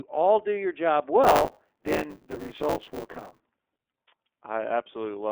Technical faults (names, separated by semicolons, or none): iLBC codec; buffer tearing